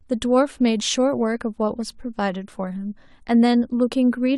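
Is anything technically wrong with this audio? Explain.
No, nothing here is technically wrong. The speech comes through without any dropout, distortion or timing fault to point to.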